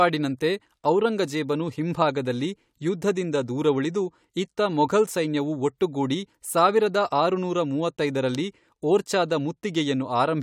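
No technical faults are audible.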